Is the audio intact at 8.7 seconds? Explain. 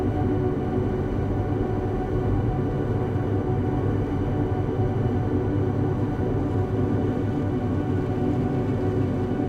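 Yes, at 8.7 seconds the audio is intact, with no dropout, click, distortion or other fault to be heard there.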